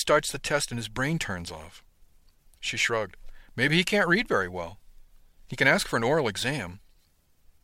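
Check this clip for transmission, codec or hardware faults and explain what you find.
Nothing turns up here: the speech comes through steady and intact, with no faults of any kind to point to.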